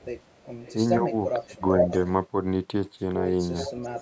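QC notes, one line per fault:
0–0.05 s, 0.31–0.39 s, 0.61–0.74 s, 1.71–2.09 s and 3.59–4.02 s, echo leak: a delayed copy of the far talker returns, about 0.45 s late in the first three scraps and about 0.44 s late in the last two. It sits well below the speech at first (about 25 to 40 dB down), rises to about 5 dB above it at 1.71 s, and is about 10 dB down at the end. A loudspeaker-side echo canceller likely failed to remove this pickup.
1.0–1.14 s and 1.39–1.62 s, speech suppressed in double talk: while both sides speak, the near talker's level dips, by about 10 dB over roughly 150 ms in the first stretch and by about 20 dB over roughly 200 ms in the second, so the voice sounds pushed back. The likely cause is an echo canceller that could not tell the local talker from the returning echo and so attenuated both, with the deeper cut in the later stretch.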